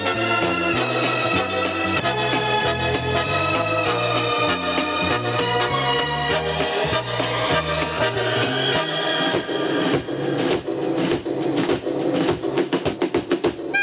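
From start to finish the gain is pulled down the moment a loud sound arrives, a level swing of around 15 dB. Loud and quiet passages sit unnaturally close together, giving a squashed, flattened quality. This is gain pumping, most likely from input gain set far too high and a fast limiter clamping down on each peak. The audio also stops at 4 kHz, as expected from a narrowband call codec such as G.711.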